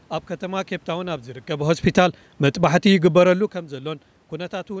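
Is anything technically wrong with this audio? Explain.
Yes. From 1.5 s to 3.28 s the speech slowly sinks in level by about 4 dB, and the room noise behind it sinks by the same amount. That is automatic gain falling. The call's gain control judged the input too loud, or its background noise too strong, and eased its gain down over nearly two seconds. Because the background drops in step with the voice, the change comes from the processing, not from the talker shifting position around 1.5 s.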